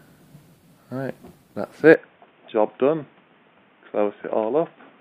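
An input switched to a poorer device, likely, from 1.94 s to the end of the clip. With no gap at the changeover, the sound abruptly narrows: nothing survives above 3.6 kHz, so it turns dull and boxy, as if captured by a different microphone or a headset's call profile. The level drops by roughly 5 dB, and a new background noise floor appears, sitting around 35 dB below the signal.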